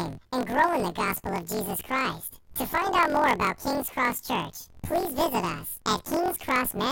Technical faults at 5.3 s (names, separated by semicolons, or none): planar audio read as interleaved